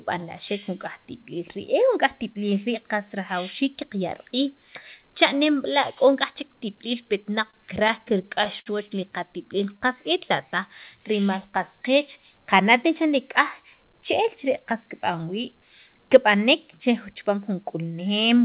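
Speech carried over a call link whose sound stops at 4 kHz, and between 7.46 and 8.68 s it shows repeated stalls (stutter). About ten brief holds, the longest around 62 ms, stretch earlier sound while late packets arrive. Unlike packet-loss dropouts, nothing is skipped; the audio drags.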